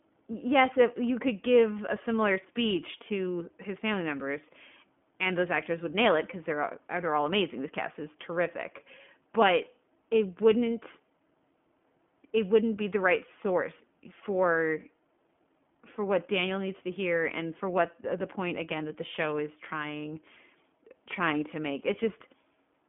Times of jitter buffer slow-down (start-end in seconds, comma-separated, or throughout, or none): none